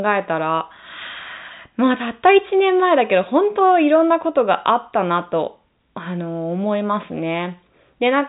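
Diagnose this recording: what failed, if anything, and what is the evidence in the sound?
Nothing failed here; the only thing the sound shows is the normal top limit near 3.8 kHz of G.711 telephone coding.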